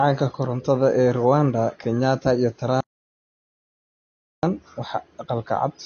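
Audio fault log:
throughout: low-bitrate audio saved at a high bitrate. The speech sounds dull, with a hard ceiling: nothing at all reaches above 6.6 kHz, so sibilants lack their top edge and the air around the voice is gone. That band limit is a trace of an earlier heavy compression, likely a low-bitrate encode somewhere near 32 kbit/s, later re-saved as a high-bitrate MP3 that kept the damage but could not undo it.
2.81 to 4.43 s: audio dropout to silence. The speech stops abruptly mid-flow and the next 1.63 s is dead digital silence, with no room tone or background left underneath, before the sound returns just as suddenly. Whatever was spoken in that stretch is simply missing. This points to the input signal being cut off while the recording kept running and filling the gap with silence, likely a momentary disconnection or mute upstream.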